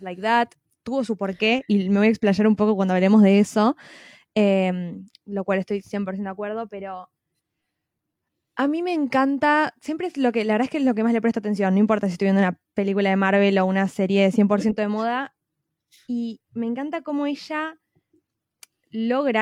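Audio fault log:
No audible faults anywhere in this speech recording.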